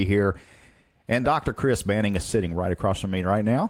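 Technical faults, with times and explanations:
2.37–2.59 s, lost packet rebuilt from error correction: about 120 ms of speech turns rougher and noisier with no gap. That fits roughly six lost packets, each rebuilt from a low-bitrate copy carried in the next one. Unlike concealment, nothing is repeated or smeared.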